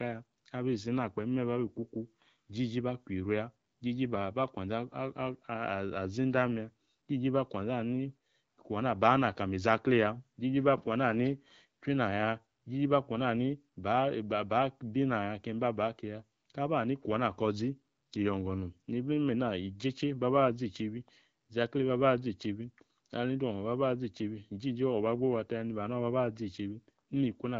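No technical faults can be heard in this speech.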